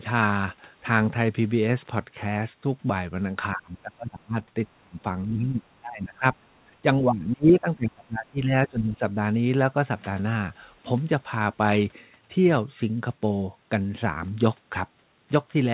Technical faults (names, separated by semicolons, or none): speech suppressed in double talk; other side's voice leaking through